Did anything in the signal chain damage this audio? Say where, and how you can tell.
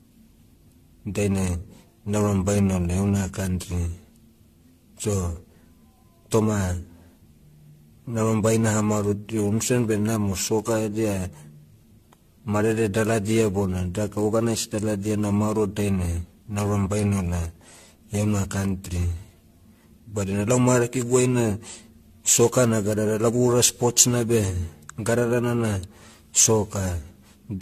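Yes, at the codec stage. Throughout, the speech sounds swirly, hollow and smeared, with nothing above 14.1 kHz. This is likely generation loss: about ten re-encodes, fitting AAC-LC near 64 kbit/s, each adding fresh quantisation damage.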